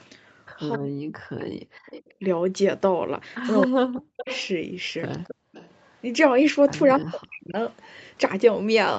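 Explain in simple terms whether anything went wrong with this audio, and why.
Yes, a few things. The voice sinks almost to silence or breaks up around 0.78 to 1.64, 3.66 to 4.28 and 6.99 to 7.58 seconds. This is speech suppressed in double talk, likely the call's echo canceller turning everything down while both people spoke.

A repeat of the voice trails about a quarter second behind, from 1.39 to 2.14, 3.61 to 4.48, 5.24 to 5.95 and 7.72 to 7.88 seconds. This is an echo leak: the loudspeaker sound got past the canceller and was sent back, probably.

The room sound briefly drops out between 5.35 and 5.52 seconds. This is background gated by the echo canceller, which cut the microphone hard while the loudspeaker played.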